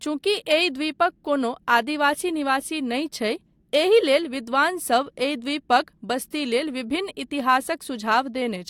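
No audible technical faults anywhere in this speech recording.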